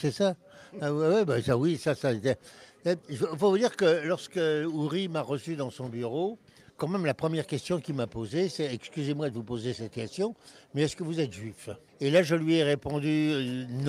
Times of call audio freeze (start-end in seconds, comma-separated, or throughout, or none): none